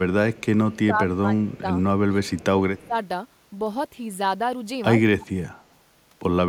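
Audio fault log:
0.34–0.45 s, 1.54–1.60 s, 2.79–2.87 s: echo leak. A faint copy of the speech returns 103 ms late, about 30 dB down, likely loudspeaker sound the far end's echo canceller failed to remove. On a spectrogram, weak smeared harmonics trail the originals by a tenth of a second.
0.58–1.27 s, 1.43–1.68 s, 2.07–2.95 s, 4.99–5.42 s: speech suppressed in double talk. The speech dips by roughly 15 dB in the first two spans, 20 dB in the third and 30 dB in the last, likely an echo canceller clamping down while both sides talked. The waveform shows pinched envelopes.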